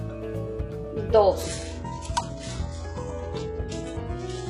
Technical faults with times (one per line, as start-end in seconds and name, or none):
0.00-4.49 mains hum
1.43-4.49 adaptive stream at a lower bitrate